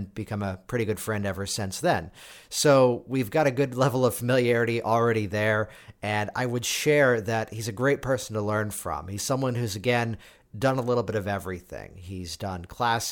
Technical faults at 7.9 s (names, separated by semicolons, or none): none